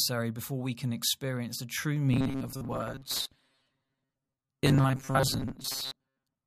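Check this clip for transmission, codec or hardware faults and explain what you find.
One fault is present: robotic sound from repeated short buffers, from 2.13 s, right after "can experience the true", to the end of the clip. The likely cause is new audio arriving too slowly, so the playback side kept re-sending its last fragment, about 7.5 ms long, while real audio was dropped. Roughly half of what plays is repetition. The constant fragment length imposes a fixed 134 Hz pitch, turning the speech into a rigid metallic buzz that only loosely tracks the words.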